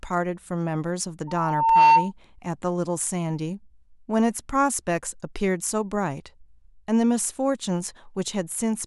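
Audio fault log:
1.27–2.12 s: loudspeaker feedback squeal. A single tone at 909 Hz swells out of the speech over about half a second to roughly 10 dB above it, as the microphone keeps re-amplifying the loudspeaker. Unlike a steady interfering tone, it builds up by itself.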